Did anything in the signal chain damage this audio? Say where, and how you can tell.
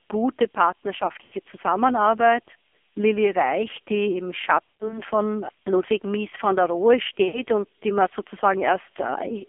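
Yes. At the codec stage, the AMR narrowband mobile codec runs throughout. The spectrogram shows a hard band from 250 Hz to 3.4 kHz, with a heavy buzzy, synthetic texture that fits a low mode around 5.9 kbps.

On the radio network, there are lost AMR speech frames at 1.24–1.35 s, 4.77–5.01 s and 7.28–7.42 s. At each gap the decoder stretches the last sound, so the waveform envelope decays toward silence before the sound recovers.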